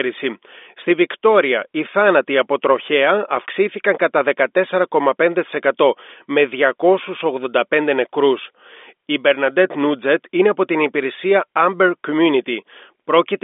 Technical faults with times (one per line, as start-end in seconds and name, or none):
none